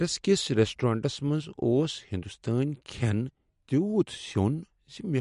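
A short speech recording with MP3 compression damage that's plainly audible the whole way through. Nothing survives above 11.2 kHz, so the top end is sliced off at a hard ceiling. Below that, the sound has the swirly, watery quality you get when the encoder runs short of bits and drops weaker frequency lines, which then flicker in and out between frames. The overall picture likely points to an MP3 encode at a low bitrate, something around 48 kbps.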